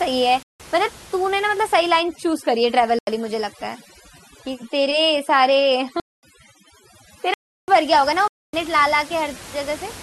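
At 0.43 s the speech drops out for 0.17 s. This is a block of digital silence. The output buffer was likely not filled in time, so zeros went out instead. The length fits an 8192-sample buffer. There is no fade.

From 2.01 s to 9.42 s, overdone noise removal sets in. The reduction is set too strong. Frequency bands near the noise estimate are pulled far down, and quiet parts of the speech go with them. The room noise, about 21 dB below the speech, drops and breaks up into twinkling specks.

More silent blocks fall inside this stretch. They come at 2.99 s for 85 ms, 6.00 s for 230 ms, 7.34 s for 341 ms, and 8.28 s for 256 ms. The ones at 2.99 s and 7.34 s fit 4096- and 16384-sample buffers. Each is a hard hole.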